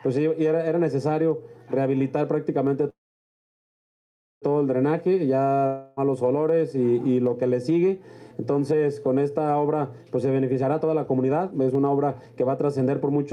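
The audio pumps throughout: the background swells in pauses and ducks by around 10 dB under each loud sound, likely gain pumping from excessive gain hitting a fast limiter, seen as a flattened, breathing waveform envelope. From 2.89 to 4.45 s a call audio freeze holds the last sound briefly, then falls silent for about 1.47 s, a blank spectrogram band, before resuming where it stopped, likely from a drained jitter buffer. From 5.66 to 6.00 s a long network dropout fills the gap with a fading buzz of repeated spectral texture, and about 0.3 s of audio is lost, likely from undelivered packets. From 10.42 s to the end, a jitter buffer speed-up plays the audio at 132% speed with unchanged pitch, cutting roughly a second of short pitch-period pieces and compressing events horizontally on the spectrogram.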